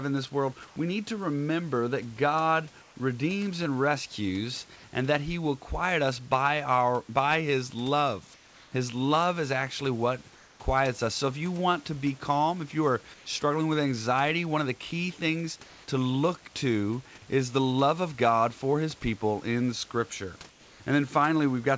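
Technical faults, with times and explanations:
0.68–0.76 s, 2.82–2.96 s, 4.76–4.84 s, 8.34–8.72 s, 10.36–10.60 s, 13.14–13.26 s, 15.64–15.88 s and 20.50–20.80 s, comfort noise in place of the background: In these short pauses, lasting 80 to 380 ms, the room noise turns flat and featureless. It shifts by about 1 to 3 dB, mostly quieter, slightly louder at 0.68 s. The likely cause is discontinuous transmission. The sender goes silent in pauses, and the receiver fills them with synthetic noise shaped only roughly like the room.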